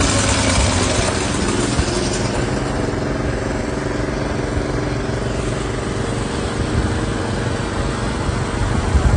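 Throughout the sound, nothing reaches above about 9.9 kHz, and two distinct sets of coding artefacts sit on top of each other. This is likely transcoding between lossy codecs, consistent with a low-rate AAC pass followed by a WMA encode. Unlike a single coarse encode, the artefacts come from two different coders at once.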